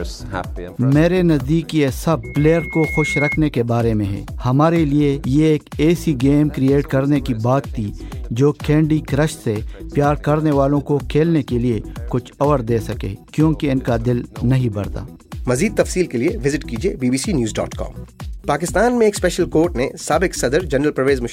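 Loudspeaker feedback squeal runs from 2.23 to 3.38 s: a single 2.2 kHz tone swells over about a second until it sits roughly level with the sound itself. The microphone is hearing its own loudspeaker, and at that frequency the loop gain tops one, so the tone keeps feeding itself.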